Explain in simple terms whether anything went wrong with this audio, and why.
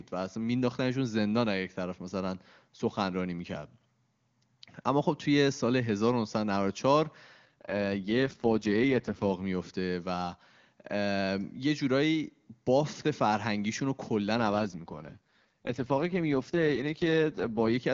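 Twice, the phone network had trouble with the radio link and told the call's voice codec to drop to a much lower data rate, spending the spare capacity on protecting against errors. This is an AMR rate drop. It happens from 7.45 to 9.34 seconds and again from 14.36 to 17.77 seconds. During those stretches the speech turns rough, raspy and more artificial, though it stays continuous with no gaps. Each time the rate recovers, the clearer sound returns.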